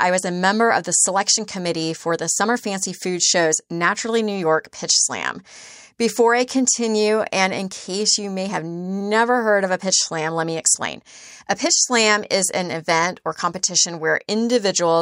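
No technical faults can be heard anywhere in the speech recording, and the signal stays steady and intact throughout.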